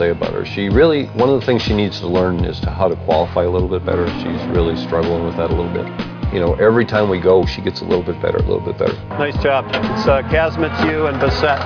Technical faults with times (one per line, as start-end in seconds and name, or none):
none